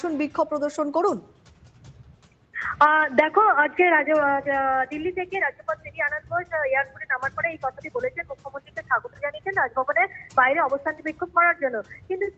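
A noise suppressor tuned for speech stays active across the whole clip and treats this sound's sustained parts as noise. Its gain rides up and down by roughly 10 dB, so attacks come through while held tones and decays keep sinking. The result is audible pumping and a thinned, fluttering texture, with reverb tails clipped short instead of fading naturally.

The sound is cut by the noise suppressor hardest in five places. From 1.21 to 2.54 s a long stretch drops by about 12 dB. Shorter dips follow at 5.55 to 5.9 s (about 10 dB), 8.17 to 8.9 s (about 11 dB), 9.06 to 9.22 s (about 11 dB) and 11.83 to 12.1 s (about 10 dB). In each, the suppressor's gain clamps down on steady or fading material, so the level briefly sags or the tail is shaved off while sharper onsets survive. The band stops at 8 kHz, which fits the Opus call path the audio travelled through.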